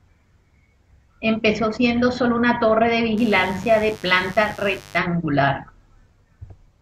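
From 3.17 s to 4.98 s, right after "sólo una torre de", a mains buzz sits under the speech, well below it in level. Switching spikes at twice the 50 Hz supply rate are leaking into the signal path, which points to a dimmer, rectifier or broken shielding. Their harmonics climb into the kilohertz range. That gives a raspy, edgy buzz rather than the smooth, low tone of plain hum, which has almost nothing above the first few harmonics.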